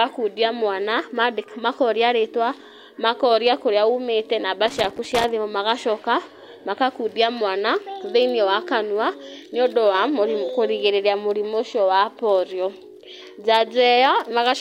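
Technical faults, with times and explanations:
4.68–5.29 s, loose connector crackle: an irregular burst of crackle and scratching lasting about 0.6 s, ending just before "thimũ magacoka makakundia". A worn or dirty contact is rapidly making and breaking, so the speech signal is chopped on and off in quick, uneven bursts.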